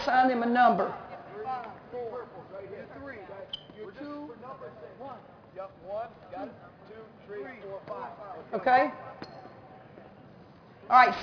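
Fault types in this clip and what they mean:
Aliasing: The sample rate was cut without a low-pass filter first, which fits a drop from 48 kHz to 11 kHz. Everything above the new limit of 5.5 kHz folds back below it and lands at wrong, unrelated frequencies. It runs through the whole clip. The folded energy sits about 25 dB under the main signal. It adds a gritty, metallic edge to bright sounds, and the spectrum runs hard up to 5.5 kHz.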